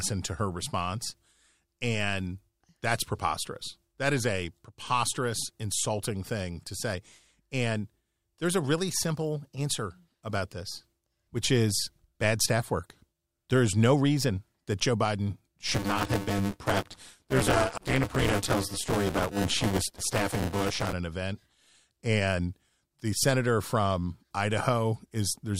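Buffer tearing runs from 15.67 to 20.93 s, ending just before "an event". Writer and reader cross each period, so most of every buffer replays audio about 15 ms old, producing a robotic 200 Hz buzz.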